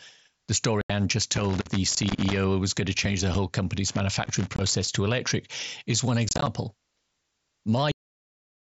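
Unconcealed Bluetooth headset packet loss first appears from 0.81 to 0.90 s. About 82 ms of voice packets between headset and phone never arrived, and nothing was filled in to hide the gap. The speech simply vanishes into a hole with hard edges, and the link's light mSBC graininess stops with it.

Loose connector crackle follows from 1.36 to 2.44 s. A worn or dirty contact was making and breaking as it shifted, chopping the signal into an irregular burst of scratchy crackle.

A second short packet-loss gap falls at 3.34 s, about 7.5 ms long, and is heard as a brief dropout.

Loose connector crackle returns from 3.88 to 4.88 s, just before "to electric is one". Inside that stretch, from 4.56 to 4.59 s, another unconcealed packet loss cuts out about 22.5 ms. That abrupt hole sits within the scratching.

From 6.29 to 6.47 s, just after "to electric is one", packet loss is scattered. About 90 ms of audio is missing across 180 ms, with no single run longer than 22.5 ms. 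The many small holes make the speech sound rough and chopped rather than cleanly interrupted.

The clip then has a cut-off end at 7.92 s. The final buffers were never written or played, so the sound stops mid-sound and drops straight to digital silence with no natural decay.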